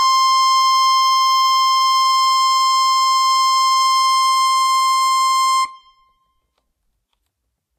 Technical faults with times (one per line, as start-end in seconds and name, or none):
0.00-7.78 Vorbis compression